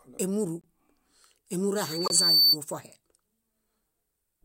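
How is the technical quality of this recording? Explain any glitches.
The speech is marred by two faults: decoded corrupt frames at two points and a loudspeaker feedback squeal in the middle.

Corrupt frame decoded, 0.61 to 0.65 s and 2.05 to 2.12 s: damaged compressed data, likely spanning a few consecutive frames each time, was decoded anyway, putting energy at wrong frequencies. The first is a faint blip; the second is a loud, harsh burst.

Loudspeaker feedback squeal, 1.75 to 2.57 s: a microphone is picking up its own loudspeaker, and the loop gain exceeds one at 4.5 kHz. That tone swells over roughly 0.7 s into a piercing squeal about 10 dB above the speech.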